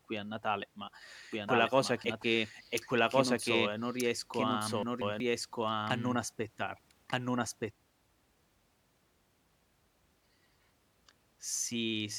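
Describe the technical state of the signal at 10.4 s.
At 10.4 s the speech signal is intact, with no audible technical fault at that point.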